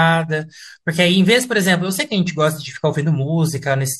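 A speech recording, with nothing technically wrong with it.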